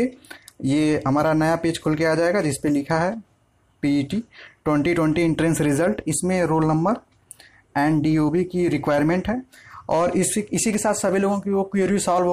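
At 10.73 s a sharp snap cuts in over the sound, lasting only a split second and peaking at a moderate level, around -20 dBFS. This is an electrical switching spike, most likely a nearby switch, motor or static discharge arcing and coupling into the audio line.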